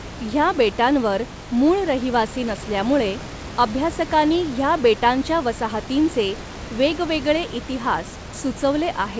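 Nothing goes wrong anywhere in this recording, so there's no technical trouble to point to at any moment.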